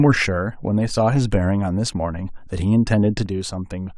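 A speech clip whose level drops abruptly by about 6 dB from 3.26 s to the end, most likely because one channel drops out before the mono sum.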